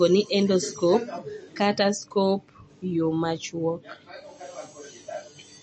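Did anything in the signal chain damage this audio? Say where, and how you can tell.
Yes, at the codec stage: treble stops dead at 8.3 kHz throughout, with watery, swirling artefacts, likely MP3 compression at roughly 32 kbps; a simple low-pass filter wouldn't swirl.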